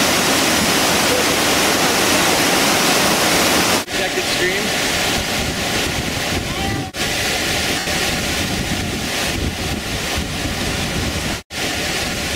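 At 0.62, 2.36, 4.88 and 7.79 s you get lost LE Audio frames: gaps of 30, 20, 20 and 80 ms where the LC3 decoder had nothing to work with, so it repeated the last spectrum with random signs. Each one comes across as a short noisy smear. The 7.79 s drop is long enough, which fits about eight 10 ms frames, that the repeated spectrum fades away partway through. The light lossy compression underneath leaves little to hear.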